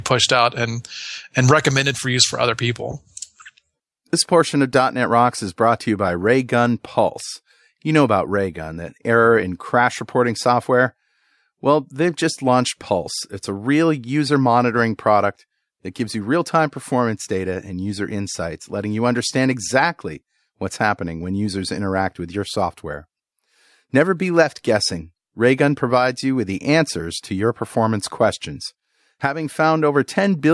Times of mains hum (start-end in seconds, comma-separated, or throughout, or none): none